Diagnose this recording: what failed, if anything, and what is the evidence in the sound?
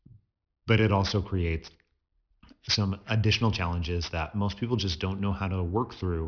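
Aliasing from a sample-rate conversion step runs through the whole clip. Sibilants sound gritty and metallic, and the spectrum stays dense right up to a hard edge at 5.5 kHz, which fits a drop from 48 kHz to about 11 kHz with no anti-aliasing filter. Energy above 5.5 kHz folds back below it as unrelated tones, fairly strong at around 15 dB under the speech. A properly filtered downsample would instead sound dull, with nothing harsh near the band edge.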